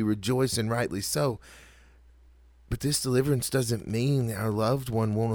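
From 3.41 s to the end, Wi-Fi interference appears. The audio circuit rectifies a nearby radio's beacon every 102.4 ms, producing faint, steady ticking about ten times a second, roughly 35 dB below the speech. On a spectrogram these show as evenly spaced thin vertical broadband lines.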